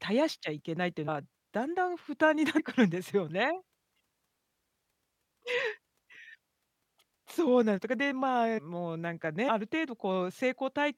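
Compressed frames are skipped at 1.07, 2.58 to 2.60, 8.57 to 8.59 and 9.48 s. Dropped 23.2 ms frames make the speech jump ahead, about 100 to 500 ms each, leaving a brief blip or click at each join.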